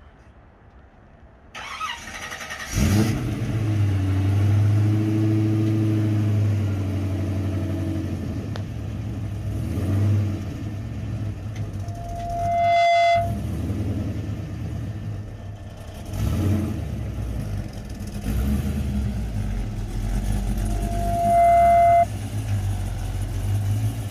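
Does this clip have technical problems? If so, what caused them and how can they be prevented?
Yes, there's loudspeaker feedback squeal twice, from 11.83 to 13.46 s and from 20.62 to 22.06 s, both a steady 687 Hz tone. The mic is hearing its own speaker, and at that frequency the loop gain tops one, so the tone feeds itself and swells over about a second the first time, a bit faster the second, ending up a few dB and then roughly 10 dB above the program. Keeping the mic out of the speaker's throw, lowering gain, or notching 687 Hz would stop it.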